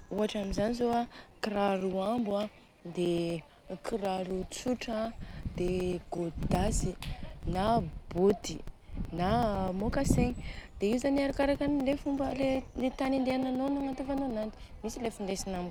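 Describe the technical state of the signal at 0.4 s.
At 0.4 s the speech carries a steady ticking, a short gap every 0.125 s, part of periodic USB or driver dropouts running from 0.06 to 15.56 s. Each time the bus or driver stalls, a few milliseconds of audio are replaced by silence.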